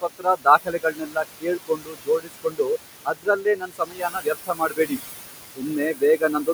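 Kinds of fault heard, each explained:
Noise suppressor artifacts: the room noise is held down by about 20 dB throughout, leaving a residue that pumps with the speech rather than cutting words.
Speech cut by the noise suppressor: stretches of speech, mainly 0.01–2.7 s and 3.05–4.99 s, are dropped by up to about 22 dB, so quiet sounds are turned down with the background.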